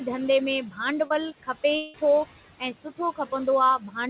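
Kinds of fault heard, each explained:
Noise suppressor artifacts: background noise pushed down about 15 dB throughout, pumping between and under the speech, unlike steady room noise.
Short concealed packet loss: at 1.07 s, about 30 ms of audio was missing and smoothly filled, giving a brief smear rather than a longer, buzzing gap.
Long network dropout: near 1.76 s, about 0.18 s becomes a fading synthetic continuation with no silence, likely a network dropout, much longer than the earlier smear.
Speech cut by the noise suppressor: around 2.6 to 3.0 s and 3.8 to 3.97 s, speech sinks about 17 dB and 10 dB, sounding faint rather than replaced.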